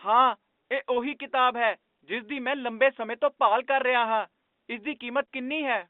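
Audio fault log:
No faults can be heard in this speech. It carries the narrow band of G.711 telephone coding, running from about 250 Hz to 3.6 kHz, which fits a 64 kbps A-law line.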